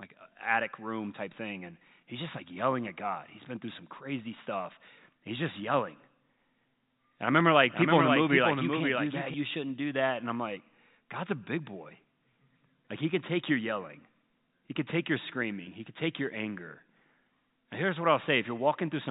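From 7.74 to 9.34 s, after "I remember like" and before "you shouldn't do that", there is a doubled audio track. A second, full-band copy trails about half a second behind, roughly 5 dB quieter. It starts and stops abruptly, with no room colour. A slower second capture path is the likely cause. The telephone band limit at 4 kHz applies to both copies.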